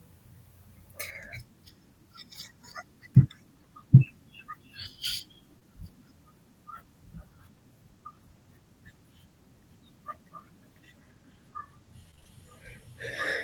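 At 5.59 to 5.63 s there is a short concealed packet loss. About 20 ms of the speech never arrived in time, and the receiver covered the hole by extending the preceding sound for roughly 16 ms before blending back into the real signal. It is heard as a brief smear or wobble in the speech rather than a silence.

From 12.11 to 12.27 s the speech turns choppy. This is repeated packet loss: the span is broken by several short holes, which fits four separate losses, the longest about 27 ms. Each gap is patched by continuing the previous sound, so about half of this 0.16 s stretch is synthesized fill. The rapid alternation between real and concealed audio gives a choppy texture, with fragments dropped.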